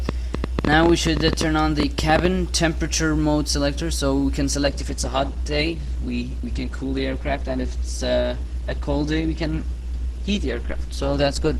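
From 0.09 to 2.26 s a train of clicks rides over the sound. There are around twenty, at about 10.6 per second, unevenly spaced. They peak about 15 dB above the audio. Interference from nearby equipment or a faulty connection is the likely source.

At 4.63 s the audio switches abruptly to an adaptive stream at a lower bitrate, with no gap. It stays degraded to the end. Nothing remains above 12.1 kHz, and codec artefacts thicken. The change points to an Opus stream dropping from 64 to 16 kbit/s.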